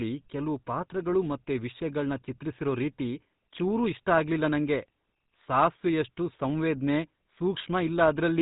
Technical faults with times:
0.00-8.41 GSM full-rate codec

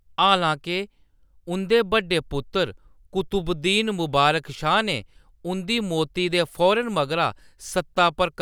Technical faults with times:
none

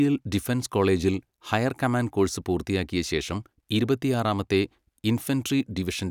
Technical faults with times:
none

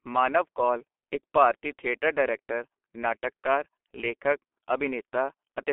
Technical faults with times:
0.00-5.72 G.723.1 codec

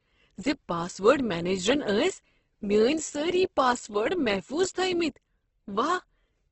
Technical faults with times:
0.00-6.52 Opus compression

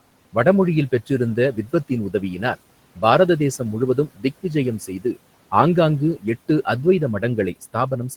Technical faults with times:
0.92-2.58 speech cut by the noise suppressor
3.95-5.17 speech cut by the noise suppressor
7.21-8.17 speech cut by the noise suppressor

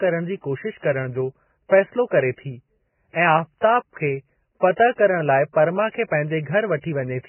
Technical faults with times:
0.00-7.29 Vorbis compression

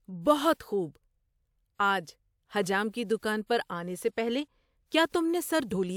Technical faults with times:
none

